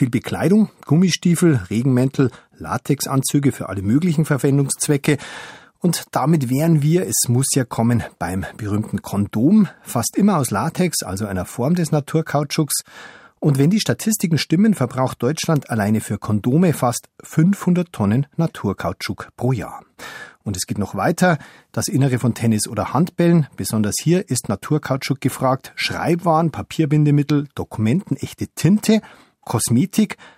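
No technical faults can be heard in this speech recording. Nothing in the audio stands out as a problem at any point.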